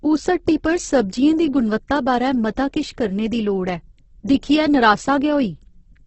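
Throughout the speech, the sound turns rough, grainy and noisy, with nothing above 8.1 kHz. Unlike MP3's swirling holes, the bands stay filled with noise-like texture, pointing likely to heavy Opus compression at a low bitrate around 12 kbps in its music mode.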